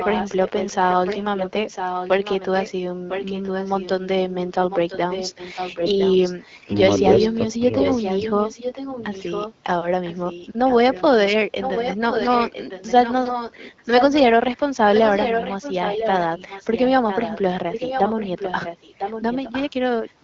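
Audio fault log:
0.0–3.9 s and 4.7–20.13 s: echo leak. A delayed copy trails the speech by 1.01 s, about 10 dB down, likely from residual loudspeaker echo, showing as faint repeated spectrogram patterns.
5.82–5.96 s: AMR bit errors. The voice turns briefly hoarse and gargly, with a smeared, noisy spectrogram patch. This fits a few corrupted frames at a bit error rate of roughly a few percent.
7.58–7.63 s: speech suppressed in double talk. The level drops by about 15 dB, likely from echo-canceller suppression, leaving a narrow notch in the waveform envelope.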